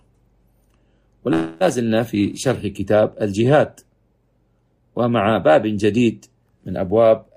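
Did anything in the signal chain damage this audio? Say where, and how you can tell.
Yes. A call audio freeze runs from 1.33 to 1.63 s. The last sound carries on as a fading buzz or hiss for about 270 ms, then resumes exactly where it stopped, with nothing lost but everything afterwards 270 ms late. This is likely network delay draining the jitter buffer.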